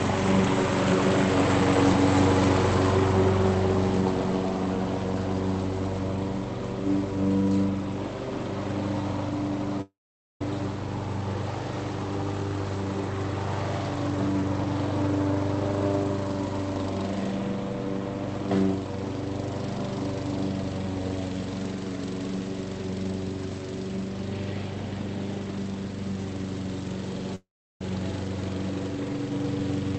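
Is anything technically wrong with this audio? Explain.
Yes. Two gaps sound like a long network dropout: 9.81 to 10.41 s and 27.35 to 27.81 s. In each, the last sound is briefly stretched into a fading buzz, then a stretch of silence follows (about 0.49 s in the first, 0.36 s in the second). The audio resumes later with that stretch of material simply gone. The likely cause is a run of lost packets that the receiver's concealment could only cover for a moment. The sound throughout is band-limited near 8 kHz, which fits an Opus call path.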